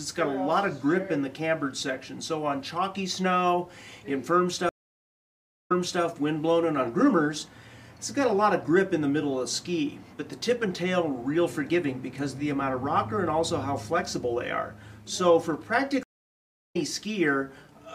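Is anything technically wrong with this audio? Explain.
Yes, there are two stream reconnects. From 4.69 to 6.03 s the audio drops to silence for about 1.0 s, then resumes 0.34 s earlier than where it stopped, so a short stretch is heard twice. From 16.03 to 16.76 s a 0.70 s silence is followed by a resume about 0.4 s later, so some material is skipped. Each time the connection broke and the player reconnected with a fresh decoder mid-stream, and the restart fades in.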